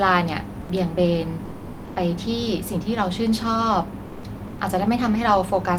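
Sound dropped by the voice detector occurs four times in this speech: 0.63–0.67 s (40 ms), 1.47–1.95 s (480 ms, about 390 ms of it real sound), 4.07–4.23 s (160 ms) and 4.47–4.59 s (120 ms). Each time the speech gives way to flat comfort noise and then resumes, likely because the sender's voice detector mistook part of the speech for background and paused transmission, which fits Opus discontinuous transmission.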